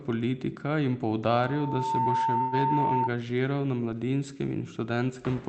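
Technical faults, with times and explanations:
1.26–3.10 s, loudspeaker feedback squeal: a 902 Hz tone swells over roughly 0.7 s to about 5 dB above the speech, as the microphone–loudspeaker loop exceeds unity gain there.
2.41–2.61 s, call audio freeze: the sound stalls into a brief fading buzz of about 108 ms, then resumes with nothing lost, likely because delayed packets emptied the jitter buffer.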